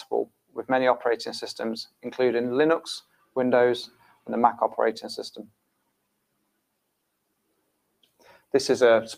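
A noise suppressor applied to music or sounds runs throughout. A processor built for speech treats steady tones, ambience and decay as noise and pulls them down, so the level swings by about 10 dB and sustained parts pump and thin while attacks pass.

Sound cut by the noise suppressor occurs at 0.04–0.63 s, 1.87–2.08 s, 3.01–3.36 s, 3.87–4.29 s, 5.36–7.02 s and 7.23–8.53 s. In each window the suppressor judged the sound to be noise and dropped it by up to about 18–21 dB, sinking held material and clipping its tails short.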